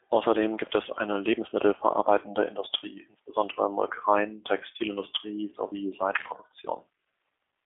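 Throughout the clip, the speech carries G.729 codec damage at 8 kbit/s. The codec rebuilds each short frame from a filter and a sparse pulse pattern. Little remains below 300 Hz, and nothing passes above 3.7 kHz. The voice sounds thin, rough and synthetic.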